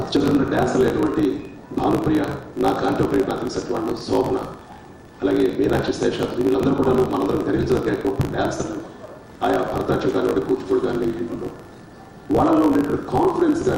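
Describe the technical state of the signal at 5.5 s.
At 5.5 s you're hearing a block size mismatch, truncated type, and it runs through the whole clip rather than just this moment. One stage writes longer blocks than the next reads, so the tail of every block gets dropped. That chopping shows up as a steady buzz at about 54.4 Hz, and the sound moves along 1.16 times too fast while keeping roughly its normal pitch. The pattern fits 1024-sample blocks being written upstream.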